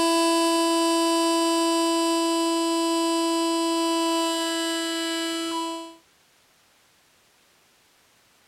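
Nothing goes wrong here at all, and the sound simply eases away in a gentle fade-out that begins around five and a half seconds in and has settled to quiet by 6.1 s.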